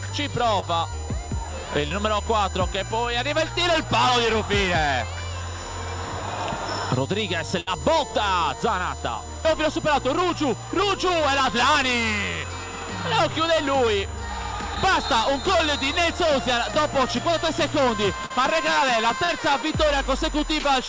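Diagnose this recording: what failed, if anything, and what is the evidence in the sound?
Power or ground leakage from a USB connection, at the analogue wiring stage, lets the bus's 1 ms frame activity into the audio. The result is a USB whine pitched on 1 kHz harmonics, strongest around 7 kHz, sitting about 15 dB below the signal for the whole recording.

On the network side, the call lost packets at 0.60, 1.88, 14.75, 18.26 and 19.24 s. Each is short concealed packet loss: the decoder extended the preceding sound across 20 to 40 ms holes, heard as brief smears or wobbles where a short sound may drop out.

A burst of packet loss at 7.60 to 7.69 s removed about 60 ms of audio. Concealment held and faded the last sound, a buzz or dwindling hiss, before playback resumed further on with the intervening material gone. The wideband call codec's cutoff near 8 kHz is also audible.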